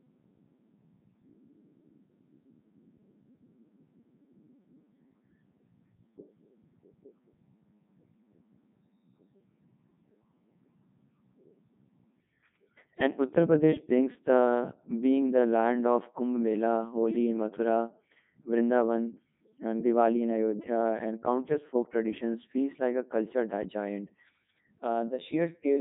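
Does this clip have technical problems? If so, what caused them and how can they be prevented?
Yes. The speech runs through a Codec 2 vocoder for its whole length, and the damage is heavy. The voice sounds robotic and buzzy. Nothing survives above 3.8 kHz. This is what a digital-radio link near 3.2 kbit/s produces. The codec keeps only pitch, voicing, energy and a rough spectral envelope. The decoder then rebuilds the voice from sine waves. The original waveform is lost. To prevent it, record or send the speech over a higher-bitrate wideband codec instead.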